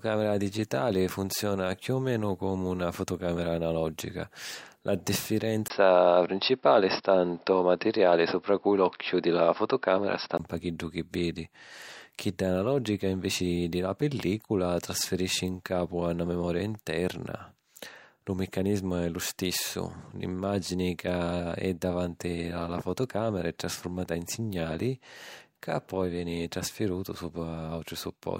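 At 5.68 s the speech drops out for about 20 ms and returns duller and boxier, with its level shifted by a few decibels and a faint new background noise well beneath it. This is likely an input switched to a poorer device, one that passes nothing above 5.5 kHz. On a spectrogram the upper band vanishes at a hard ceiling until 10.39 s. The waveform shows a brief flat gap and a step in amplitude.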